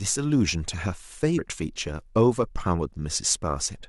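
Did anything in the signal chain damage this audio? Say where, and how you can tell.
Yes, at the codec stage: damaged data in the compressed stream. From 1.37 to 1.39 s the speech gives a brief glitch. The decoder misread corrupted frames, lost sync and resumed at the next valid frame header.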